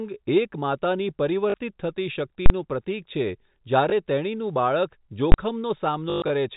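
At 1.50 to 1.54 s the receiver lost about 40 ms of the speech stream and covered the gap with packet loss with last packet repeated, replaying the final good packet. The copies don't line up with the voice's pitch, and the short run has a brief robotic stutter, which fits 20 ms packets. From 2.46 to 2.50 s a calculation produced invalid numbers at full scale. The 40 ms block sits flat at one extreme value, heard as a very loud pop at its start and another at its end with silence between. At 3.90 to 3.92 s a single 20 ms loss is patched the same way, leaving a small blip. At 5.32 to 5.34 s a second full-scale block, only 20 ms long, lands as one bang. From 6.10 to 6.30 s repeated-packet losses are scattered over 200 ms, the longest run about 120 ms. That run buzzes at the 50 Hz packet rate, a stretch of mechanical stutter heard through the narrow, telephone-band G.711 sound.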